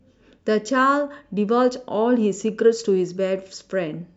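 No technical faults can be heard anywhere in the speech.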